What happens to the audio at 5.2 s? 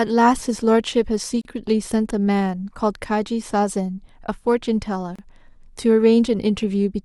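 At 5.16 to 5.19 s the speech drops out for about 30 ms: a gap at a join of encoded pieces. Two separately encoded segments were spliced without trimming, so the encoder's start-up delay and final-frame padding left a stretch of silence between them. It sounds like a brief, abrupt hole, after which the speech resumes where it stopped. On a waveform it is a flat near-zero stretch with softened edges; a spectrogram shows a thin vertical blank band, its borders slightly smeared.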